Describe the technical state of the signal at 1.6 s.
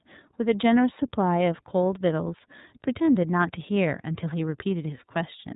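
At 1.6 s the speech carries the iLBC codec damage present throughout the clip. Each 30 ms frame's excitation is coded independently of the previous frame, so the sound is plainly rough and slightly synthetic, with a grainy texture. The coarseness fits a rate of about 13.33 kbps. On a spectrogram, everything above 4 kHz is empty, cut by the narrowband limit.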